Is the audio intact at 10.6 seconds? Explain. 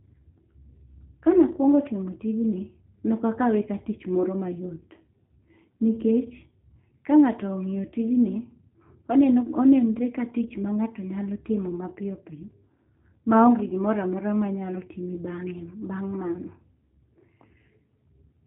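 No. At 10.6 seconds the speech carries G.729 codec damage, as it does throughout the clip. The codec rebuilds each short frame from a vocal tract filter, a pitch estimate and a few pulses. Nothing above 4 kHz survives. The result here is plainly audible. The speech sounds dull, slightly rough and synthetic. That character fits the 8 kbit/s G.729A variant.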